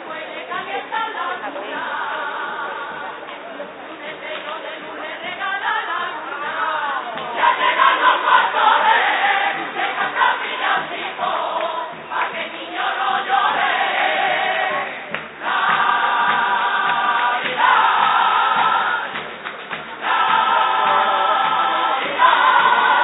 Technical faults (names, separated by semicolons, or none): none